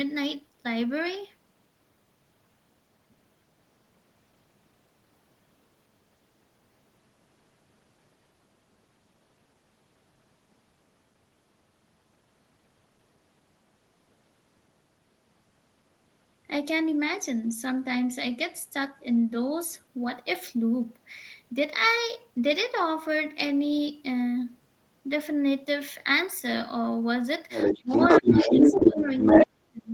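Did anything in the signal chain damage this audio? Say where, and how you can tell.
Yes. Other side's voice leaking through, from 27.49 to 29.47 s: a second voice sits at about 10 dB relative to the speech. This is call processing; the echo canceller likely failed to strip loudspeaker pickup from the microphone signal.

Speech suppressed in double talk at 27.81 to 27.9 s, 28.21 to 29.1 s and 29.3 to 29.89 s: the talker dips by about 25, 10 and 40 dB while the far side plays on the loudspeaker. The same call-processing stage likely turns down the talker along with the echo when both sides talk at once.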